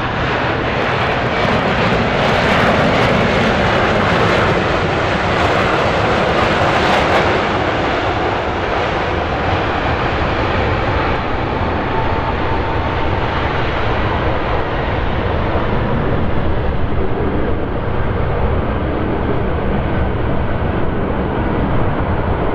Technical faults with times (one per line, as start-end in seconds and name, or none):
none